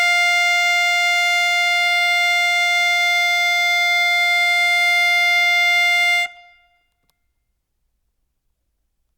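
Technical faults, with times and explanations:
No technical faults can be heard in this music.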